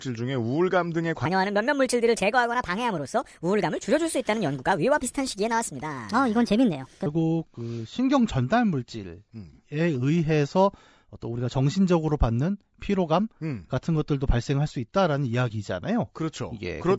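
From 1.26 to 7.06 s the speech has a wrong sample rate. It runs 1.38 times fast and about 5.6 semitones high, which fits 16 kHz audio played at 22 kHz. On a spectrogram, harmonics and formants shift upward; the waveform looks compressed in time.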